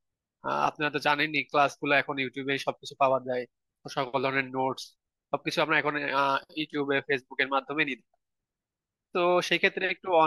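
No technical faults are audible anywhere in the speech.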